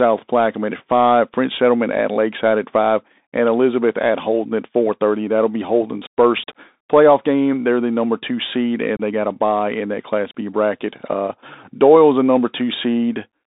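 Throughout, the Bluetooth CVSD headset codec narrows the speech to about 250 Hz to 3.7 kHz, fitting a 64 kbps link; unlike ordinary band-limiting, its slope-tracking adds granular hiss and scratchy s sounds. At 8.97 to 9.01 s, unconcealed Bluetooth headset packet loss drops about 26 ms, several packets' worth, leaving a hard-edged hole rather than a smoothed-over gap.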